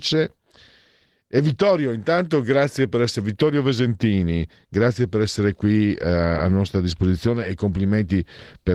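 At 4.74 s there's a block of digital silence, just 2 ms of zeros where the playback buffer evidently wasn't filled in time. The speech drops out and snaps back with no fade, so it comes across as one quick tick over the lightly coded Opus audio.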